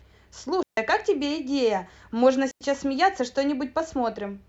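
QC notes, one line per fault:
0.63–0.77 s and 2.51–2.61 s, digital wireless dropout: the speech cuts to near silence for about 146 ms, then about 96 ms. Each gap has clean edges with no noise burst either side, as the receiver mutes quickly whenever the link loses too much data.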